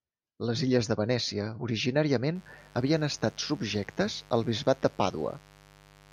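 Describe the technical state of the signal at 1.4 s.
At 1.4 s the speech signal is intact, with no fault audible at that moment.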